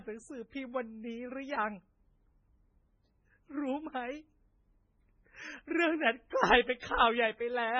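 Speech throughout with a watery, swirling texture: the s sounds turn metallic and chirpy, attacks blur, and nothing is heard above about 10.2 kHz, so the top end sounds dull and boxed in. The likely cause is heavy MP3 compression at a very low bitrate, consistent with something around 16 kbps. Starved of bits, the encoder cuts off the treble at a fixed point and drops weaker frequency components, which then flicker in and out between frames and produce the swirl. From 6.29 to 6.32 s a hiss of about 34 ms sits just ahead of a sharp onset, which lands soft and smeared. This is pre-echo. The codec spreads its quantisation noise evenly across a whole transform block, so when a loud attack falls late in a block, noise scaled to that attack also fills the quiet moment before it.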